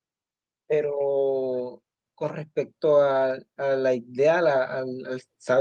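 From 0.68 s to the end of the clip, automatic gain rising lifts the level gradually as the gain control reacts to quiet input. Speech and background swell together over several seconds, which separates it from a talker simply speaking louder, where the noise floor would stay put.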